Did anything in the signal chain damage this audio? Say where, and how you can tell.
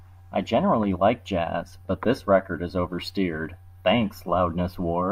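No, nothing I can hear points to any stage of the chain having damaged this speech, so there's nothing here to trace back.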